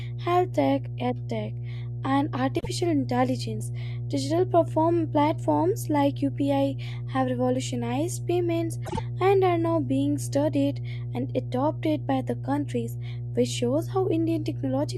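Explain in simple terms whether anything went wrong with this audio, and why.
A steady mains hum at 60 Hz runs under the whole speech clip, fairly loud, because power-line interference leaked into the signal through grounding or a nearby transformer.

There are two spots of frames out of order, where neighbouring chunks of audio played in swapped order, causing a brief garbled flutter: 2.59–2.67 s, after "tech ed tech and", and 8.85–8.99 s, between "have revolutionized payments" and "and are now being".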